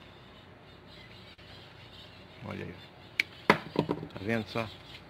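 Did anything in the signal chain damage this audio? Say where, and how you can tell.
Yes. A short stall from a late packet at 1.33 to 1.40 s happened at the network stage. The jitter buffer ran dry, so the receiver held the last sound for about 47 ms, then resumed exactly where it left off. Nothing is lost, but everything after arrives 47 ms later.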